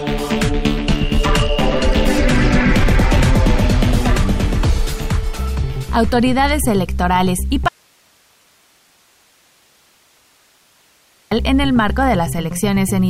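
From 7.69 s to 11.31 s, an audio dropout to a faint residue cuts the sound off abruptly, leaving about 3.6 s of hiss some 40 dB down. The source was likely lost while the path stayed live. A pause or fade wouldn't switch so instantly.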